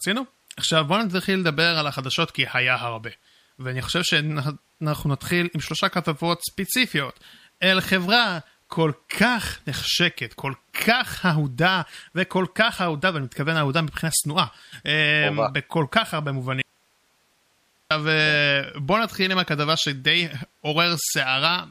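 The signal was likely lost from 16.62 to 17.91 s while the path stayed live. This audio dropout to a faint residue abruptly cuts the speech to hiss about 40 dB down.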